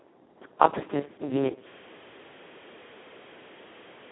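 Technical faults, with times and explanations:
Throughout: Speex codec. The speech sounds hoarse, noisy and close to robotic, which fits a very low Speex bitrate of around 2 kbps. There are too few bits to model the excitation. The sound sits in a narrow 200 Hz to 3.6 kHz line band, with nothing above 3.9 kHz.
1.69 s to the end: system hang loop. One 40 ms piece of audio repeats exactly until the clip ends. The system froze while the sound hardware kept replaying the same buffer. At 25 repeats per second, this becomes a rapid, rattling stutter.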